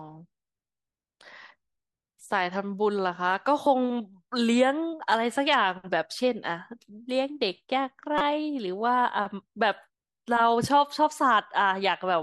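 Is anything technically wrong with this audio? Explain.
Yes. At 3.63 to 3.67 s and again at 8.18 to 8.21 s, there is damaged data in a compressed stream: a short run of corrupt bytes that the decoder cannot read properly. It misinterprets those frames, loses sync, and resumes at the next valid frame header. Each event is a brief chirp, squawk, click or short hole lasting about 35 ms. On a spectrogram it appears as a narrow vertical disturbance; on the waveform, a short disruption that breaks the surrounding envelope.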